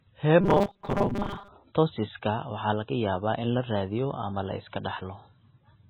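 Throughout the speech, weak detail swirls in and out, likely from heavy MP3 compression at a very low bitrate; unlike plain low-pass filtering, the remaining sound turns watery. From 0.41 to 1.49 s a rigid metallic buzz at 200 Hz appears, which fits robotic sound from repeated short 5 ms buffers, with roughly half the audio replaced. Unlike codec warble, its pitch stays fixed.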